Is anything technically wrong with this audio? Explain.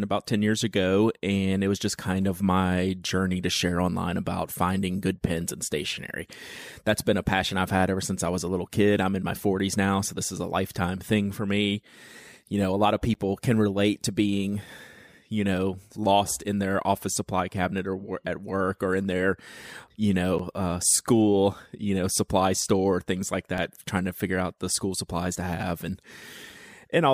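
Yes. The speech has three short blocks of digital silence. They fall at 13.14 s, after "know a lot of"; at 20.38 s, after "or in their you"; and at 23.58 s, after "supply store things like". The first two last about 10 ms. The third lasts about 1.7 ms. Each time, a run of samples drops straight to zero and then returns with no fade. The longer two sound like ticks or dips rather than holes, and the shortest sounds like a tick.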